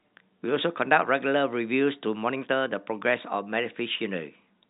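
Speech carried over G.711 telephone coding, with the band stopping at 4 kHz as that format requires and no technical fault to report.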